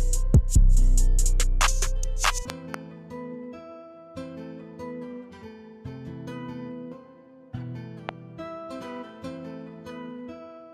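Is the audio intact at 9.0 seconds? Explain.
Yes, the audio is intact at 9.0 seconds, with no fault present at that moment.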